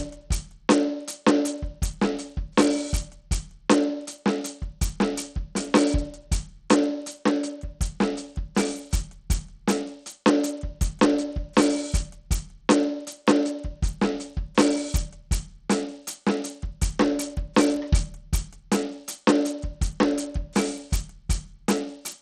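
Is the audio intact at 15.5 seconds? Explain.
No. At 15.5 seconds, as across the whole music clip, the likely cause is Bluetooth SBC compression starved of bits, with damage consistent with a rate near 80 kbps. SBC splits the signal into a few wide sub-bands and hands out bits without any model of hearing, so the weak top bands get little or nothing while the rest are coarsely quantised. The treble drops out and flickers, and a gritty, aliased noise rides on the music.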